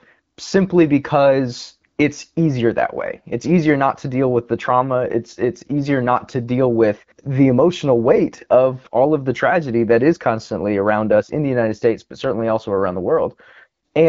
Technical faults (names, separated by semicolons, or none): none